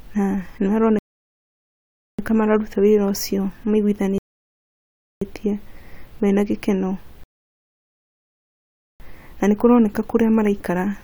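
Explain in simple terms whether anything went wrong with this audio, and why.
Three rebuffering stalls interrupt this speech: at 0.99 s for 1.2 s, at 4.18 s for 1.0 s, and at 7.24 s for 1.8 s, between "mena gĩkeno" and "na nĩ maroneka". Each time, the player runs out of downloaded audio and goes silent. It then resumes exactly where it stopped, so nothing is lost.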